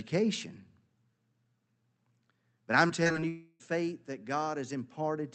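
From 2.87 to 3.24 s, repeated packet loss makes the sound robotic. Five short holes, each up to 20 ms, are patched by repeating prior audio. About a quarter of the stretch turns choppy.

From 3.28 to 3.62 s, the sound becomes a smeared, fading buzz or hiss, then goes silent for about 30 ms. This is likely a long network dropout. The missing audio never returns.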